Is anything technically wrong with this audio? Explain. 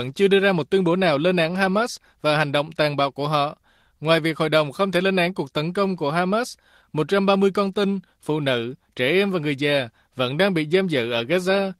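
No, nothing technically wrong can be heard anywhere in this speech recording.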